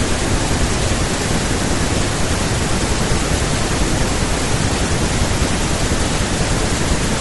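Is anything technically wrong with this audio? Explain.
Yes. Throughout the speech there is plainly audible low-delay AAC compression damage, likely from AAC-ELD at a rate that fits around 32 kbps. Its short frames resolve pitch harmonics poorly, so the voice sounds rough and grainy, with noise filling the gaps between harmonics and a dulled, synthetic-sounding top band.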